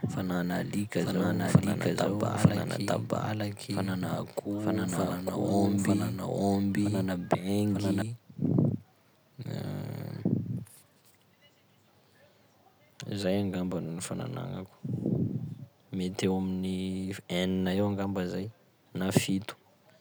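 From the start until 8.02 s the speech carries a doubled audio track: a second, equally loud full-band copy trails about a second behind, likely from the same signal being captured twice by a slower path. The waveform shows every burst repeated a second later, and the spectrogram shows duplicated patterns; the echo cuts off abruptly at 8.02 s.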